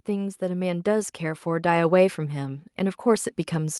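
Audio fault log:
0.05–3.8 s, automatic gain rising: the automatic gain control judged the incoming level too low and kept raising its gain for nearly the whole clip, from 0.05 s to the end at about 3.8 s, instead of settling at a fixed setting. Because the gain is applied to the entire signal, the speech and the background noise beneath it swell together, so the sound grows steadily louder, with the room tone lifting in step.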